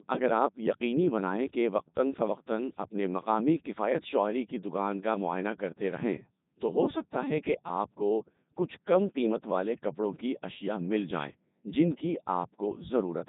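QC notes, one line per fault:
Throughout, Codec 2 vocoder: speech is rebuilt from sine waves and a spectral envelope, so it sounds robotic and buzzy, with nothing above 3.8 kHz, fitting 3.2 kbit/s.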